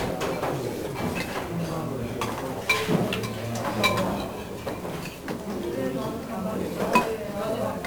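From start to finish the whole thing is coated in 1-bit DFPWM compression, and it's heavy. Each sample only nudges an adaptive level up or down, so there's constant broadband fuzz and crackle, with the top end drowned in hiss. The grain fits a rate around 48 kbps.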